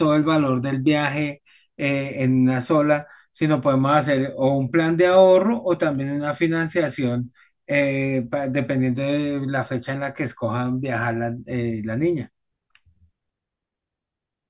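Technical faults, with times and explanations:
Nothing technical stands out in this speech recording; it all holds together fine.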